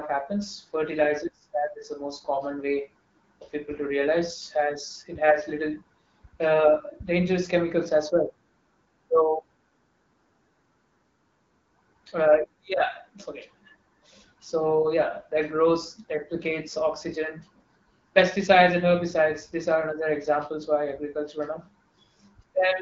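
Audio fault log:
2.00–2.09 s, AMR bit errors: for roughly 80 ms the speech turns hoarse and gargly while keeping about its pitch and loudness. On a weak radio link the less protected bits of a few AMR frames, about three at 20 ms each, arrived flipped at around a few percent, yet the check over the key bits still passed, so the decoder used them. Misplaced excitation pulses and skewed pitch, gain and spectral detail give the scratchy texture, set within AMR-WB coding at a rate that fits 12.65 kbit/s.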